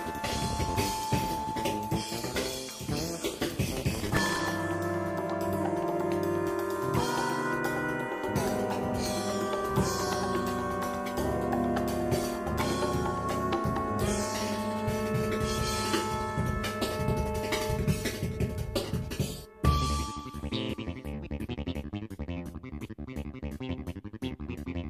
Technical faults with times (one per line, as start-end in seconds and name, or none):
3.75-4.52 processor overload crackle
12.58-12.88 processor overload crackle